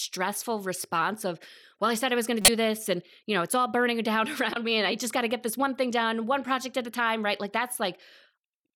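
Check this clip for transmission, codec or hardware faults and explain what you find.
Two short codec faults stand out, both of the same kind: corrupt frame decoded. At 2.42 to 2.49 s, right after "I was going to" and before "this and you know", a burst peaks near about -10 dBFS, long enough to suggest a couple of damaged frames. At 4.53 to 4.56 s, just before "me and I just", a shorter blip peaks near about -15 dBFS. In each case flipped bits in the compressed data led the decoder to rebuild the frame with wrong gains and codes, putting energy at the wrong frequencies for roughly the length of each damaged frame. Unlike a dropout or concealed packet loss, which leaves silence or a smoothed repeat, this adds foreign, chirp-like sound on top of the speech.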